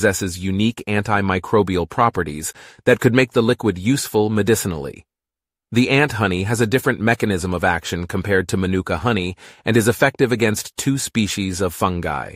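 No technical faults are audible anywhere in the speech recording.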